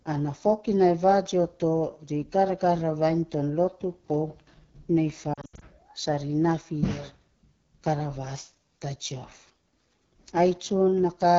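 Throughout the clip the speech carries the rough, raspy grain of the AMR wideband (HD Voice) codec running at one of its lowest rates, which fits the 8.85 kbit/s mode. The coder rebuilds the voice below 6.4 kHz from a pulse-excited vocal tract model with too few bits, so voiced sounds turn gritty. The band above that is synthetic noise. This damage is steady and evenly spread, which separates it from the brief, localised breakups that follow.

From 5.33 to 5.63 s, lost AMR speech frames break the flow. Over that 280 ms stretch about 180 ms of frames failed, in scattered short runs, the longest 80 ms, which fits roughly nine 20 ms frames. For each gap the decoder repeated the last good pitch and vocal tract settings at falling gain, so the sound warbles, smears and dips rather than cutting to clean silence as a plain dropout would. The voice then returns briefly rough.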